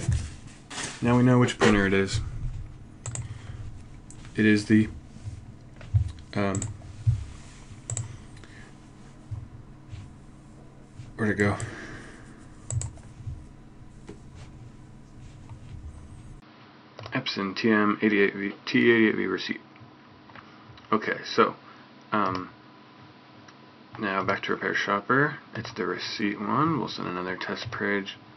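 At 16.40 s a gap of about 20 ms opens, and from there to the end the sound loses everything above 5.8 kHz and turns duller. A faint new background noise sits well below it, while the overall level stays about the same. This points to the input likely being switched to a poorer device. What separates it from a simple low-pass filter or codec bandwidth drop is the brief silence at the switch and the change in noise character.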